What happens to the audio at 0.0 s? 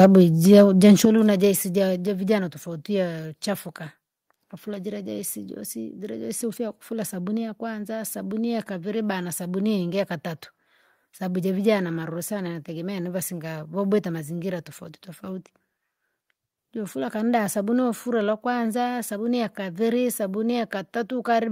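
Right at the top, from 0.01 to 0.06 s, there's microphone overload: the peaks run about 3 dB past the converter's limit and a fair share of them get flattened, giving a brief harsh, crackly edge, most likely from the mic input being set too hot for the converter.

Then at about 0.05 s the microphone volume steps down by about 3 dB. The voice and background drop together in one abrupt step, likely the call software reacting to that clipped peak by cutting the device's input gain.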